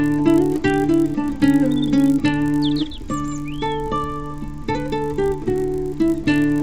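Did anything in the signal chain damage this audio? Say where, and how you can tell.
Yes. The damage is at the sample-rate conversion stage, where a resampler restarted on every block. For the whole clip there is a buzz at 50 Hz that is present only while there is signal. That rate points to 20 ms blocks, with an upsampling step that fits 16 kHz to 48 kHz. Each block was converted with no history from its neighbours, so every boundary carries a small interpolation error. Those errors repeat at the block rate and form the buzz.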